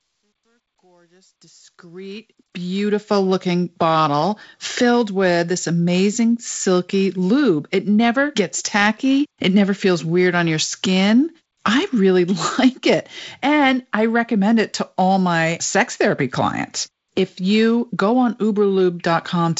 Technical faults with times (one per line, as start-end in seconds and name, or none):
0.00-3.12 truncation distortion on a fade